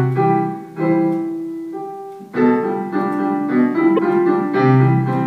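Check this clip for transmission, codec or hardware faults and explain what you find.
There's one problem, a corrupt frame decoded at 3.97 to 3.99 s. A single compressed frame arrived with flipped bits and the decoder played it anyway, so misread gains and codes scatter energy across the wrong frequencies. It comes out as a short, loud chirp, squeak, blip or burst of noise, peaking around -5 dBFS.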